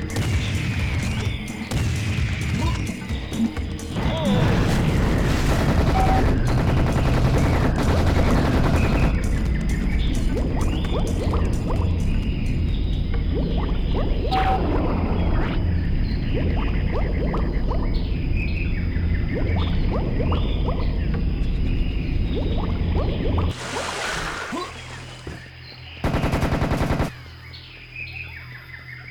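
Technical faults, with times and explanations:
No technical faults detected.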